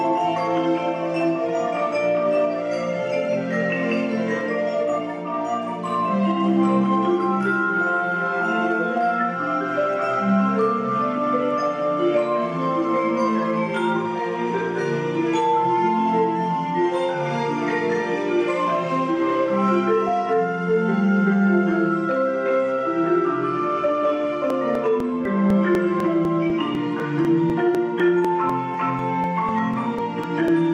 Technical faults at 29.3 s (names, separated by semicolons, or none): periodic USB or driver dropouts